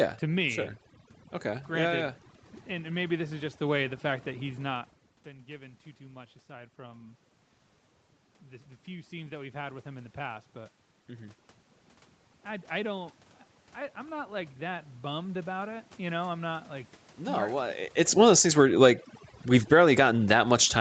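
Overdone noise removal runs through the whole clip. The noise reduction was set too strong for the room noise. It pulls individual frequency bands down or out whenever they sit near its noise estimate. Quiet parts of the speech are removed along with the noise. Between phrases the background drops, with small twinkling specks left behind. It is also band-limited, with nothing above 8 kHz, as expected on an Opus call path.

Around 4.5 s the talker seems to move back, and the input falls by about 17 dB. Automatic gain rising follows from 5.24 to 7.26 s, just after "fact that he's not". The gain control hears a quieter input and lifts its gain by about 5 dB over two seconds. Speech and the thinned background swell up together.

A second automatic gain rising runs from 9.1 to 16.98 s, after "the the few". This one is slower and larger, about 8 dB over nearly eight seconds. The level creeps upward steadily, and the residual noise specks grow with it.

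Near 17.5 s the talker seems to move again. Automatic gain falling then runs from 18.05 s to the end. The gain control lowers its gain gradually. Speech and background sink together toward the close.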